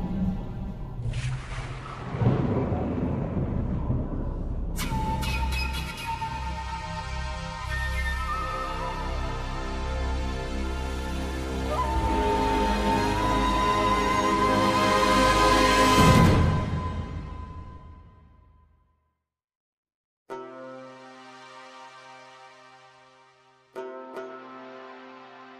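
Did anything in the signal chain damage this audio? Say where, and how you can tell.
No, the signal chain shows no damage.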